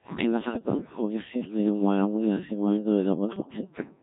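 From the start, the speech is carried through the Codec 2 vocoder, and the damage is heavy. Only pitch, voicing, energy and a rough spectral envelope survive. The decoder rebuilds the voice from sine waves, so the original waveform is gone. The result is robotic and buzzy throughout. The thinness and coarse detail fit a low rate, around 1.3 kbit/s.

Gain pumping runs through the whole clip as well. The gain swings by roughly 15 dB. Loud and quiet parts sit unnaturally close in level, and the sound is squashed. The likely cause is input gain set far too high, with a fast limiter or compressor clamping down on each peak.

From 0.43 s to 0.81 s there are bit errors on digital voice radio. Flipped bits reached the vocoder, where each bit controls the pitch, level or tone of a whole frame. The synthetic voice lurches in pitch and loudness. Its colour changes abruptly. It breaks into bleeps, warbles and robotic gibberish. 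The span suggests about ten corrupted frames, with a few percent of bits wrong.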